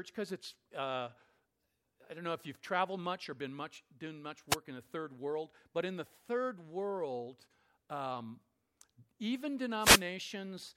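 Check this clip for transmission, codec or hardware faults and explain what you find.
Two wireless microphone noise hits break into the speech. The first runs from 4.49 to 4.56 s, between "been much doing much" and "in the third world"; the second, longer one spans 9.77 to 10.07 s. Each time the FM radio link fades as reflected paths cancel, so receiver noise rises over the voice as a brief swish of static. On a spectrogram each shows as a broadband vertical smear; the waveform shows a burst of hiss.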